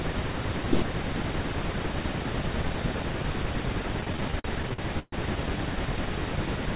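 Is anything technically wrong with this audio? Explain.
Yes. Between 4.01 and 5.15 s the speech shows repeated stalls (stutter). Packets reached the receiver late or too slowly, so its jitter buffer ran dry a dozen times in that stretch, and each time the receiver stretched the last sound to cover the wait, fading it during the longer gaps. The longest hold lasts 130 ms, and about 333 ms in all is filled this way, roughly 29% of the span. Nothing is lost, but the speech drags and stutters, carried over the call path's narrowband sound with nothing above 4 kHz.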